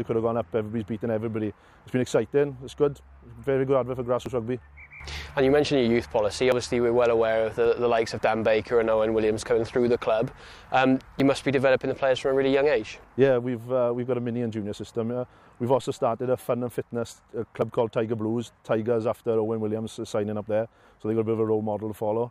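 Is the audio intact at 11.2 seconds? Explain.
No. At 11.2 s the audio jumps forward, with about 20 ms of sound missing and the two sides butted together without any gap of silence. This is likely a dropped buffer (overrun), where the capture software failed to read a block before the hardware overwrote it.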